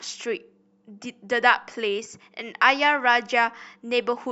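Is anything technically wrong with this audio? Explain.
Yes. Clock slip clicks run from 0.34 to 4.14 s, about ten faint ticks spaced roughly every 0.3 s. They likely come from two unsynchronised clocks drifting around 70 ppm apart, so a single sample is dropped or repeated at each slip, ticking through the louder speech.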